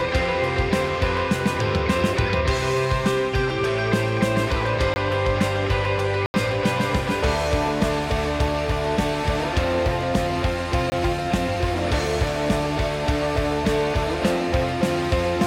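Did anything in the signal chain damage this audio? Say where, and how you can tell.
Yes. At the driver or buffer stage, output likely wasn't filled in time, leaving blocks of digital silence at 4.94 s (20 ms), 6.26 to 6.34 s (80 ms) and 10.90 s (20 ms). The sound cuts out and back with no fade.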